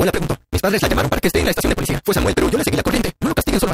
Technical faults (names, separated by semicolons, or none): block size mismatch (truncated)